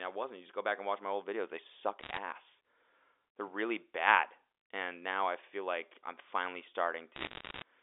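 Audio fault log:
2.00 to 2.18 s and 7.16 to 7.62 s: bit errors on a digital phone line. Flipped bits corrupt single samples in the G.711 stream. Errors in the sign or high bits jump sharply, giving ticks. Clustered, they form brief crackle bursts, the later one denser, near one percent.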